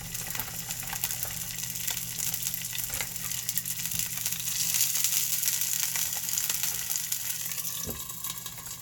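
No technical faults can be heard anywhere in these everyday sounds. There is no moment in the recording that needs to be singled out.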